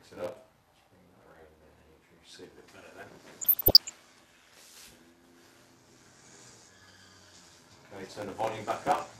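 There's a steady buzz at about 86.1 Hz under the whole thing, and everything plays at 0.861 times normal speed with the pitch more or less where it should be. That's a block size mismatch (padded): each block arrives short and gets topped up with silence, which fits a 512-sample read. Then from 3.41 to 3.90 s you get DAB burbling, as short noise blips hit individual sub-bands. Bit errors are getting through into the MP2 data, at a rate that sounds like around one percent.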